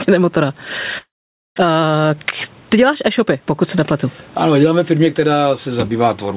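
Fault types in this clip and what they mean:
Gain pumping: The level swings by around 15 dB, so loud and quiet parts sound squashed together. The likely cause is input gain set far too high, with a fast limiter pulling it down on every peak.
Long network dropout: From about 0.98 s to 1.6 s the speech breaks off. The last sound is drawn out into a fading buzz or hiss, then goes silent, and speech returns with a piece missing. This likely comes from audio packets not arriving for that stretch, which the receiver covered with decaying filler.
Jitter buffer speed-up: From about 1.68 s to 3.42 s, just before "pokud se nepletu", the speech runs about 10% faster at unchanged pitch and sounds hurried. The receiver had built up excess delay and cut out many tiny pitch-period slices, removing about a fifth of a second in total.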